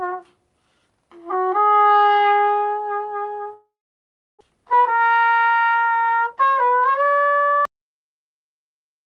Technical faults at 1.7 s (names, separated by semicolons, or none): none